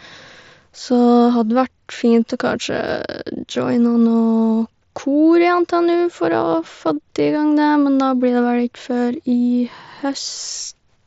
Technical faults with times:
3.93 concealed Bluetooth headset packet loss

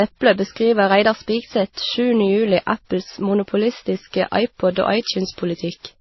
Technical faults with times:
0.00-6.01 transcoding between lossy codecs
4.70-6.01 pre-emphasis left on

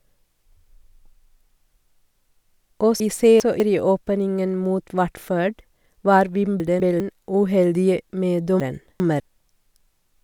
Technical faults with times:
3.00-3.60 chunks out of order
6.60-7.00 chunks out of order
8.60-9.20 chunks out of order

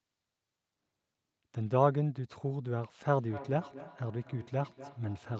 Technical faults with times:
3.11-5.40 feedback echo between two devices

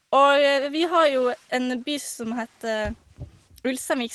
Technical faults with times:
none

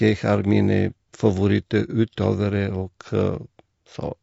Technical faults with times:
0.00-4.23 low-delay AAC compression

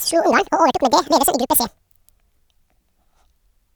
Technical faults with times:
0.00-3.76 audio read two samples at a time (double speed)

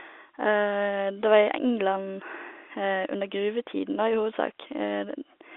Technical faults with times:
none

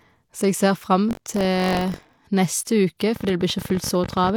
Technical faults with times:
1.09-2.18 buffer tearing
3.16-4.30 train of clicks

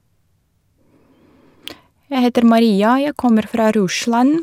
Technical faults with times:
none

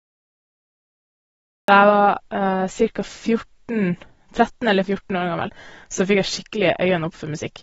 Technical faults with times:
0.00-7.62 AAC compression
0.00-1.68 cut-off start

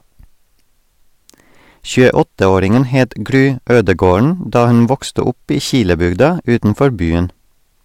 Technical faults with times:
0.00-7.84 hard clipping

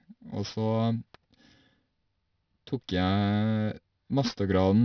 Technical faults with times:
0.00-4.84 aliasing

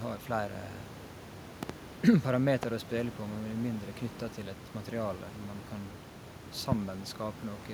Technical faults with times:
1.63-1.72 loud pop
2.63-2.65 loud pop
6.72-6.74 loud pop

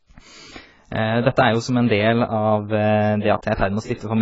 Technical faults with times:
0.00-4.22 AAC compression

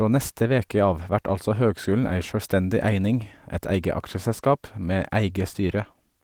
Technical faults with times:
none

